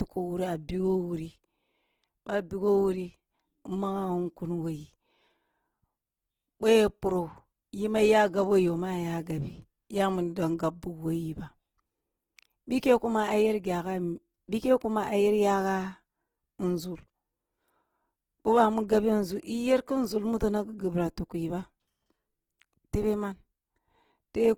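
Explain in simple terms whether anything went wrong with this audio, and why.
From start to finish the speech keeps heavy-compression artefacts. It is likely low-bitrate audio saved at a high bitrate, which cannot bring back what was lost.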